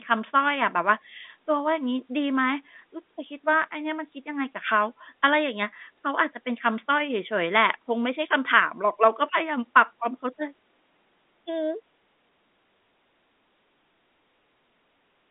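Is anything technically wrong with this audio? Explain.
No, nothing is technically wrong with this audio.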